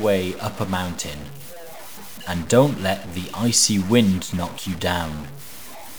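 From start to end, the speech carries harsh, buzzy distortion. The pauses fill with a steady noise floor. This points to a stuck bit, likely from a faulty data line or converter. Its weight is fairly high, near -35 dBFS, so the errors stay clearly audible.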